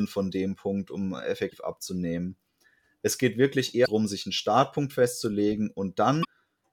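Three short bursts of damaged data in the compressed stream break into the speech: at 1.48 to 1.53 s, at 3.83 to 3.88 s right after "geht wirklich" and before "sich einen", and at 6.21 to 6.25 s. Each lasts about 50 ms. Those stretches of the encoded data got corrupted, so the decoder misread the frames, lost its place and had to hunt for the next valid frame header. You hear a quick garbled chirp or blip each time.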